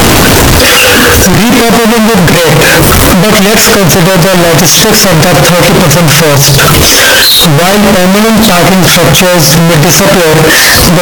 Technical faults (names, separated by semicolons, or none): signed and unsigned mixed up